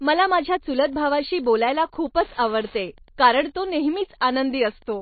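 From the start, the speech has plainly audible damage, likely from MP3 compression. Nothing is present above 4.5 kHz, and the remaining band has a watery, swirling quality as weak spectral components drop in and out between frames, which fits a low bitrate of about 26 kbps.

From 0.81 s to the end, Wi-Fi interference is audible as a steady ticking at a 102.4 ms period, roughly ten per second, sitting about 30 dB below the speech. A nearby radio's beacon bursts are being rectified by the audio circuitry and reach the signal path.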